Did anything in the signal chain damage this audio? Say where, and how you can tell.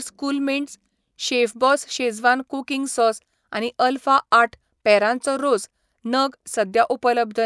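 Yes. From 0.95 to 3.05 s the speech carries a steady 20 Hz buzz of tiny ticks, present only under sound. This points to sample-rate conversion: the resampler restarted on every block, 50 ms long, so each block edge lacked its true neighbours and left an error.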